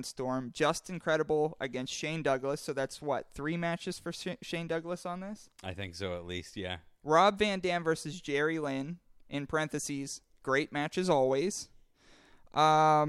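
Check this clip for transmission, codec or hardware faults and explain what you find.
Nothing in the recording stood out as a problem on listening.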